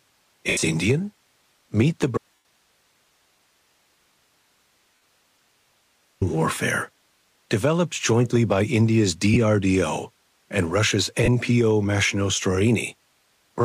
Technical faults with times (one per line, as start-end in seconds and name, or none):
0.47-0.63 lost LE Audio frames
2.17-6.21 audio dropout to a faint residue
2.35-2.45 lost LE Audio frames
4.95-5.02 lost LE Audio frames
6.55-6.57 lost LE Audio frames
9.34-9.36 lost LE Audio frames
11.24-11.28 lost LE Audio frames